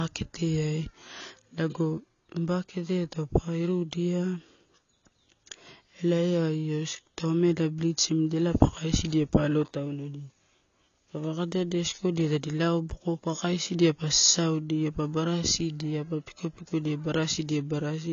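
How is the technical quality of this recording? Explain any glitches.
The quality is poor throughout, with plainly audible AAC compression artefacts. A low-bitrate AAC encode, likely AAC-LC at around 24 kbps, discards fine spectral detail and cuts everything above 6.9 kHz. The speech sounds dull and smeared, with a watery, warbling texture on sibilants and held sounds.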